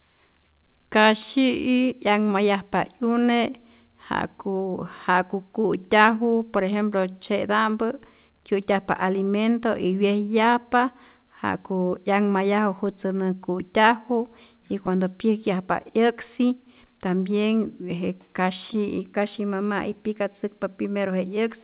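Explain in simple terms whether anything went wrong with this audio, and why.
Several timing problems affect this speech recording, which travelled over a phone-style call link that removes everything above 4 kHz and so sounds a little narrow.

The underlying fault is clock drift between sender and receiver. The sending device's clock ran about 1.5 percent slow compared with the receiving device. The receiver therefore got audio slightly slower than it played it out, and its small holding buffer kept running low. This mismatch lasts the whole clip and causes the other timing problem.

To cope, the receiver made repeated timing corrections from about 1.0 s to 20.55 s. It kept stretching the audio by repeating tiny pieces, so playback ran at roughly 99 percent speed and the clip grew by around a fifth of a second in total. Each repeat is very short, so it comes across as a slightly uneven pace or an occasional faint hiccup rather than an obvious stutter.

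Between about 11.18 s and 12.64 s there are also scattered short gaps. About three tiny pieces of audio arrived too late, the longest only a few milliseconds. The receiver filled each hole by extending the sound just before it, covering roughly 1 percent of that stretch. These may show up as a brief tick or a slight smear.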